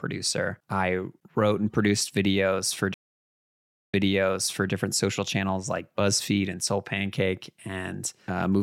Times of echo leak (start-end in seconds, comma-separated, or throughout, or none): none